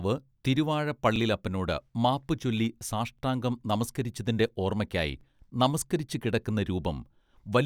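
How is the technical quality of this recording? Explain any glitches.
The recording has a recurring join fault: overlapping chunks at 1.16, 3.19 (just before "നമസ്കരിച്ചതിന്റെ ഓർമ്മക്കായി നമസ്കരിച്ചുകിടക്കുന്ന"), 5.21 (just after "നമസ്കരിച്ചതിന്റെ ഓർമ്മക്കായി") and 7.24 s. Each 2-second chunk begins about 25 ms before the previous one ends, so that sliver of speech replays, heard as a small regular stutter.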